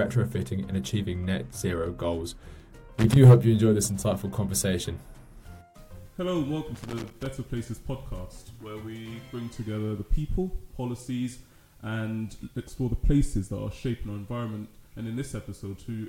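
At 2.98 to 3.16 s and again at 6.75 to 7.26 s, loose connector crackle chops the sound into irregular scratchy bursts. It shows as ragged dropouts with spiky broadband vertical streaks on a spectrogram.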